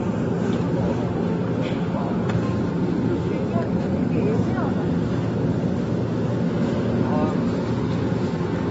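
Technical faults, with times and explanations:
Throughout, AAC compression: likely a low-bitrate AAC-LC encode, fitting roughly 24 kbps, which removes everything above 7.6 kHz, leaving dull, smeared audio with plainly audible codec damage.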